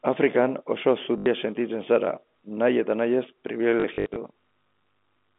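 At 1.18 to 1.26 s, and again from 3.80 to 4.16 s after "nahi eta nahi ez", there is packet loss with the last packet repeated. Repeated 20 ms packets buzz at 50 Hz, a robotic stutter.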